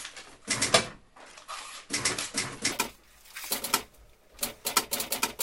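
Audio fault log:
2.72–5.42 s, wrong sample rate: From 2.72 s the samples leave the system at twice the rate they were captured at, with no conversion in between, which fits 24 kHz material being clocked out at 48 kHz. Everything runs at 2.0 times speed and rises a full octave, 12 semitones, because time and pitch scale together by the same ratio. The sound turns high and rushed, like a tape at double speed, through to the end.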